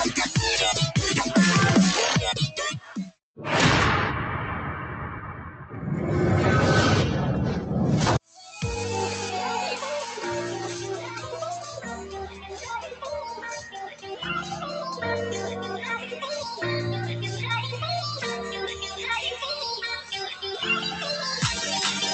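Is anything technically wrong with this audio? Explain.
Yes. A noise suppressor was applied to music or sounds for the whole clip, and it treats sustained material as noise. It was built for speech, so it reads steady tones, ambience and reverb tails as something to remove. Attacks pass, but held sound sinks. The result is a pumping, fluttering level, with swings of roughly 10 dB. Decays thin out instead of ringing naturally.

Sound cut by the noise suppressor appears at seven points: 2.8 to 3.19 s, 8.21 to 8.38 s, 11.6 to 13.04 s, 13.34 to 14.16 s, 15.99 to 16.19 s, 18.72 to 19.03 s, and 19.97 to 20.44 s. Here the suppressor clamps harder. Levels dip by about 14 dB at 2.8 s and about 12 dB in the next three spans. The last three spans dip by about 6, 6 and 10 dB. The long stretch near 12 s sounds sunken.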